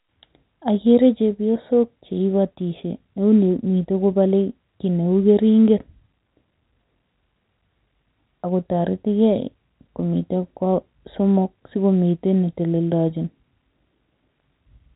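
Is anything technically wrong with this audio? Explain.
No, nothing here is technically wrong.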